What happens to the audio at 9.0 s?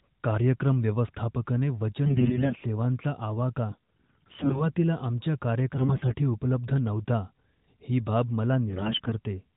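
Right after "ही बाब", from 8.70 to 9.13 s, you get AMR bit errors. The codec's less protected bits are arriving flipped, heavily, so the excitation pulses and the fine pitch, gain and spectral values go wrong. Pitch and level roughly hold, but the speech turns hoarse, scratchy and gargly.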